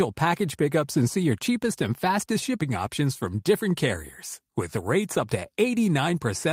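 No technical faults can be heard.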